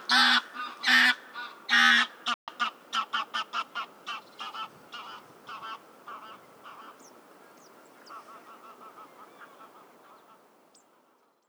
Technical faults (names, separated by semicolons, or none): playback stall